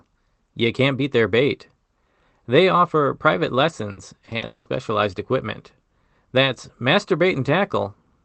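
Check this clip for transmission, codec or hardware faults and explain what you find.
There's one real transmission fault here. The call path's coding is audible as band-limiting, with nothing above about 8 kHz.

Repeated packet loss (robotic sound) runs from 3.91 to 4.67 s, right after "offer private". Five gaps, 340 ms in all and up to 200 ms each, were patched by stretching the last sound. That's about 45% of the stretch, so it comes out choppy.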